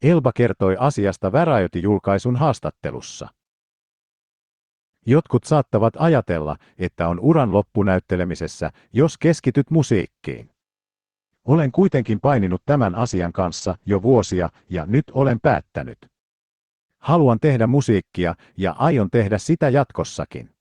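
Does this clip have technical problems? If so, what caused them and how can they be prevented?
Yes. A call bitrate drop runs from 10.34 to 18.11 s. The encoder falls from 40 kbps to 10 kbps, stays at the floor for about 5.03 s, and its bandwidth shrinks to 8 kHz, so the speech turns coarse, watery and muffled before recovering. Preventing it means keeping a stable, uncongested network path and setting a higher minimum bitrate for the Opus encoder.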